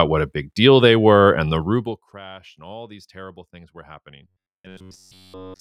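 From 1.6 to 2.13 s, just after "they were and the", the level drops by about 25 dB through zipper noise. The fader move is applied in coarse steps, roughly a hundred per second, instead of a smooth ramp, and each jump puts a tiny click into the speech. The result is a fine ticking that rides on the sound until "and all these terrible". On a waveform the envelope descends as a staircase, and a spectrogram shows faint vertical lines spaced about 10 ms apart.

At 4.23 s, after "these terrible things were", the speech turns into a robotic sound that lasts to the end of the clip. A rigid metallic buzz at 93.8 Hz takes hold, although the rough shape of the syllables still comes through. That buzz frequency corresponds to a period of about 10.7 ms, and the likely cause is that the same short buffer is being repeated while fresh audio is skipped, with almost none getting through. A spectrogram shows evenly spaced horizontal harmonics stacked on 93.8 Hz. 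The waveform shows the same short segment tiling over and over.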